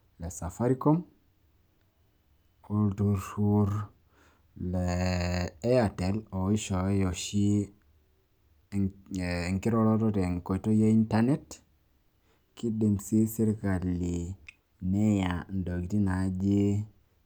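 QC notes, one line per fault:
Nothing stood out on listening to the speech.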